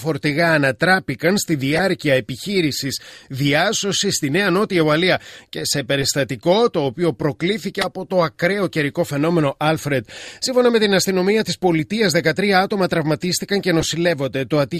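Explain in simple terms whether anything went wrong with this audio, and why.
Yes: a few frames of compressed data were damaged but decoded anyway (a corrupt frame decoded), causing short chirps or noise bursts at 1.75–1.81, 6.01–6.04, 7.81–7.85 and 13.80–13.83 seconds.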